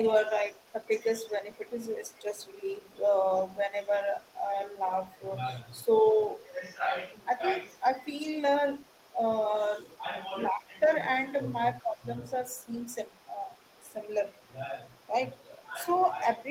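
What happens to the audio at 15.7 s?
Two faults overlap here. Speech suppressed in double talk runs from 9.59 to 15.76 s. The talker's level dips intermittently, by as much as about 15 dB and for around a second in total, which is likely an echo canceller turning everything down while both sides spoke. On a waveform the envelope shows sudden hollows. Alongside it, the other side's voice is leaking through from 11.76 s to the end. A faint second voice sits roughly 35 dB below the speech, likely residual loudspeaker pickup the canceller missed. It appears as weak traces between the main speech bands.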